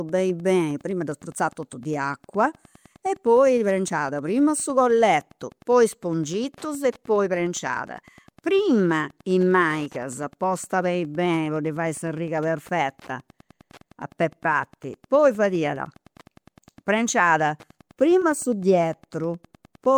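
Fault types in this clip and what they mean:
Wi-Fi interference (throughout): a nearby Wi-Fi radio's transmissions are picked up and rectified by the audio circuit, turning each radio burst into an audible click. Here the beacon repeats every 102.4 ms, so a steady ticking of roughly ten per second runs under the speech for the whole clip, sitting around 30 dB below the speech, low in the mix but present from start to finish.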